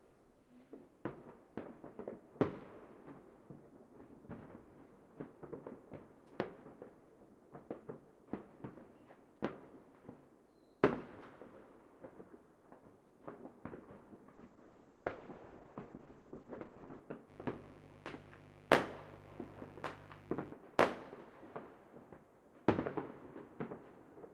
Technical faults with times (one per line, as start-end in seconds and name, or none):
14.35-17.07 call bitrate drop
17.26-20.55 mains buzz